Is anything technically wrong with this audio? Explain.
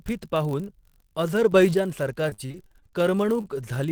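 Yes, there are several problems in this speech clip, one running the whole way through and four at specific moments.

The block size mismatch (padded) runs from start to finish. One stage hands over blocks shorter than the 1024 samples the next stage reads, and the leftover space is filled with zeros. That drops a tiny silent gap into every block, which you hear as a steady buzz at about 46.9 Hz, the block rate. A 1024-sample read at 48 kHz would give exactly that rate. Because the padding is small, playback runs at 0.999 times normal speed.

From 1.52 to 1.74 s there's a sudden gain jump of about 5 dB. The level changes from one sample to the next with no ramp, so the speech and the background noise get louder together, in one step. That points to a digital gain setting or bit shift being applied instantly, which is the likely cause. Over a stretch that short it comes across as an abrupt bump in loudness.

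Between 2.29 and 2.94 s you get repeated packet loss, the robotic-sounding kind. There are eleven holes in that stretch, the longest about 45 ms, with roughly 220 ms of audio lost in total. Each hole gets patched by carrying the last bit of sound forward, so about 39% of the stretch is concealment rather than real signal. With the patches coming back to back, it sounds choppy, with pieces missing.

Right after that, from 2.99 to 3.38 s, there's a jitter buffer slow-down. The receiver was rebuilding its reserve by repeating single pitch periods and bits of pauses over and over. That adds about 49 ms and drops playback to 89% speed, with the pitch unchanged. Sounds get drawn out and there can be a slight warble, so the speech seems to drag for a moment.

Finally, at 3.41 to 3.46 s there's a short stall from a late packet. The buffer ran dry and the receiver held the last sound for about 29 ms until the packet showed up, then carried on from the same spot. 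Nothing is actually lost, but that sound hangs a touch too long, with a faint buzz or dip, and the delay goes up by about 29 ms.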